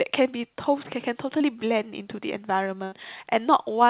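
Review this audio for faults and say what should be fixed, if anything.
A short concealed packet loss at 1.38 to 1.42 s: about 20 ms never arrived, so the receiver extended the previous sound, leaving a brief smear that shows as a smoothed, repeated patch in the waveform. A burst of packet loss at 2.84 to 2.94 s: about 80 ms went missing, and the receiver carried the last sound forward while fading it, giving a held, decaying buzz or hiss that looks like a flat, blurred stretch on the spectrogram before speech resumes further on. Both come from packets lost or arriving too late on a call path whose 4 kHz band ceiling fits G.711. A larger adaptive jitter buffer, forward error correction or redundancy, and a more stable network link would prevent these gaps.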